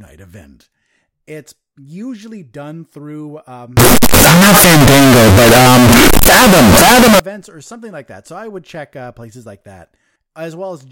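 Signed and unsigned mixed up, 3.77 to 7.20 s: the top bit is likely flipped, so zero crossings jump full-scale, giving harsh, uniformly loud distortion.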